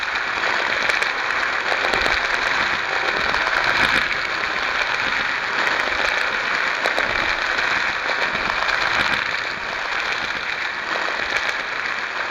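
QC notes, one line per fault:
Throughout, doubled audio track: every event is heard twice, with a second copy about as loud as the first arriving around 150 ms later. Attacks are followed by a distinct second hit, and the repeat carries the full frequency range with no decay or room colouring, so it sounds like a clean duplicate rather than an echo. The likely cause is the same signal being captured a second time through a slower path and mixed in out of step.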